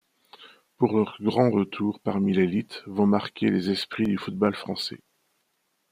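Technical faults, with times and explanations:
3.85 to 4.53 s, processor overload crackle: Just after "l'élite vont marquer les", a burst of gritty crackle tears across the speech. The processor could not keep up, so about ten of its very short audio buffers, around a millisecond and a half each, were missed. Each missed buffer was simply skipped. That leaves tiny gaps with hard edges. Strung together, they sound like crackling grit riding on the speech until the load eases.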